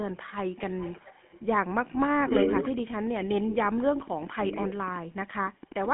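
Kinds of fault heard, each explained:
GSM full-rate codec: The speech carries the buzzy, gravelly roughness of the GSM full-rate codec, which rebuilds the voice from a vocal-tract model driven by sparse, regularly spaced pulses. A spectrogram shows energy confined to roughly 150 Hz to 3.4 kHz, nothing above 3.8 kHz, and smeared harmonics.
Echo leak: A delayed copy of the speech trails about 343 ms behind, likely from a loudspeaker side whose echo canceller let its microphone pickup back through. It grows from barely audible to nearly as loud as the speech, appearing as repeated, time-shifted patterns on a spectrogram.
Speech suppressed in double talk: Between about 3.2 and 5.0 s the speech dips sharply in short stretches, likely because an echo canceller turned this talker down while the other side spoke. The waveform shows envelope holes up to roughly 35 dB deep.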